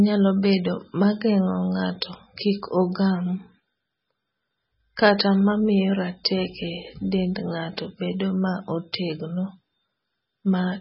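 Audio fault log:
Throughout: MP3 compression, heavy. The speech stops dead above 5.6 kHz and goes watery and swirly, likely a starved encoder around 16 kbps dropping bands.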